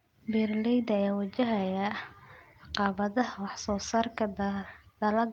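Listening through the speech recording, nothing stood out as a technical problem at any point.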